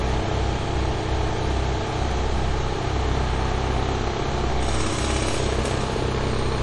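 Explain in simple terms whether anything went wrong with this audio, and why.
Throughout the recording, the sounds have a watery, swirly quality, with metallic chirps and no treble above about 11.2 kHz. The likely cause is heavy MP3 compression: short of data, the encoder cut off the high frequencies and kept dropping quieter details.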